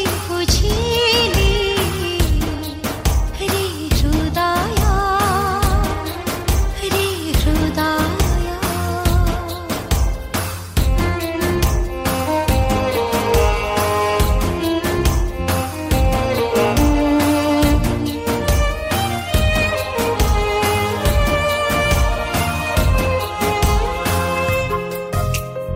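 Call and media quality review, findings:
No faults found on review.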